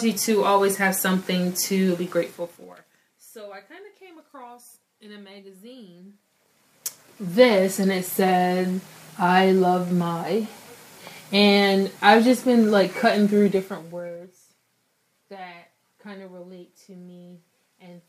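Zipper noise occurs twice. From 6.06 to 7.51 s the level rises roughly 25 dB. From 13.40 to 14.34 s it falls roughly 20 dB. Both moves use unsmoothed 2 dB steps, about ten a second. Each step clicks, so the fades tick audibly.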